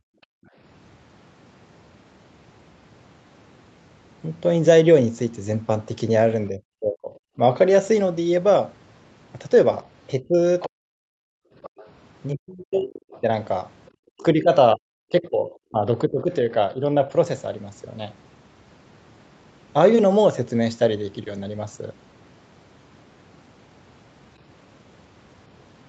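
A speech recording of a call, band-limited to nothing above 8 kHz by ordinary call microphone processing, with three kinds of echo-canceller fault. Background gated by the echo canceller appears at 0.00 to 0.56 s and 11.17 to 11.56 s. The room tone falls away by about 40 dB for roughly half a second the first time and about 0.4 s the second, then snaps back. Only the background drops while the talker is silent, which separates this from a dropout or a noise gate acting on the speech. Speech suppressed in double talk shows up at 6.49 to 7.4 s, 10.2 to 10.89 s and 12.33 to 17.08 s. The talker's own voice sinks steeply, loses its top or breaks into pieces: about half a second of damage in the first span, a little less in the second, and around two seconds scattered through the long third span. The likely cause is the canceller mistaking simultaneous talk for loudspeaker echo and turning everything down. 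Unlike packet loss, the gaps are attenuation rather than clicks or repeated fragments. The other side's voice leaking through is heard at 10.60 to 10.66 s, 11.62 to 11.9 s and 13.1 to 13.21 s. These are brief scraps of a second voice, moderately below the talker in the first and progressively fainter after that, likely residual loudspeaker echo the canceller failed to remove. A distinct second voice, rather than a delayed copy of the talker, separates this from ordinary room echo.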